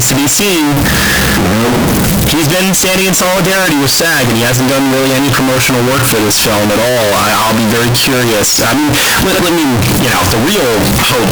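From start to finish the speech sounds like float read as integer, likely 32-bit float samples decoded as 32-bit integers. Sign and exponent bits dominate, squaring the waveform at an almost fixed, high level: very loud, harsh, background noise as loud as the voice, pitch still traceable.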